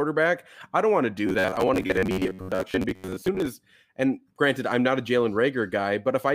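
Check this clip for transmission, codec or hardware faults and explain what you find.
There's one fault: robotic sound from repeated short buffers, running from 1.27 to 3.51 s, right after "I don't want to" and clearing before "and granted I'm not". The speech turns into a stiff, metallic buzz pinned at about 93.8 Hz that still loosely tracks the words. That pitch points to roughly 10.7 ms chunks being replayed, likely because fresh audio wasn't arriving in time, so about half of the stretch is repeats filling the gaps.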